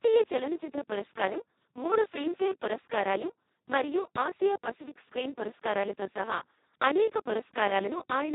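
Speex codec damage runs throughout: heavy, robotic, hoarse speech from starved excitation coding, pointing to roughly 2 kbps, with nothing above 3.8 kHz.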